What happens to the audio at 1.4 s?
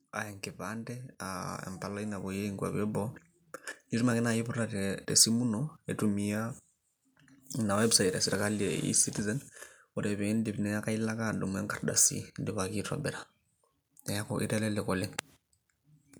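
At 1.4 s the level is climbing as part of an automatic gain rising event that runs from about 0.59 s to 3.01 s. The gain control judged the input too quiet. It responded by turning its gain up step by step, by about 9 dB in all. The speech and the background noise swell together. The rise is smooth and slow, with no sudden jump.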